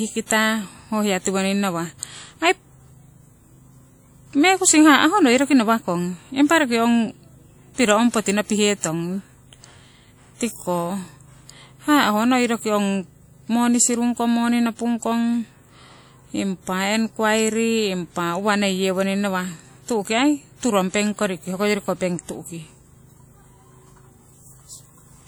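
Throughout the speech there is plainly audible transform-codec damage: a ringing, washy texture and a hiss that swells and fades with the signal, with weak detail dropped out. This is likely WMA compression, at a rate that fits roughly 48 kbps, smearing quantisation noise over long blocks.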